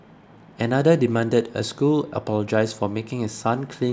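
No technical faults are audible.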